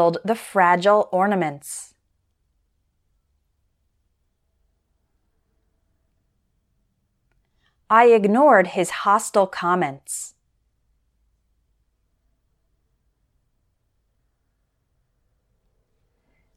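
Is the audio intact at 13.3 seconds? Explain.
Yes, the audio is intact at 13.3 seconds, with no fault to be heard at that point.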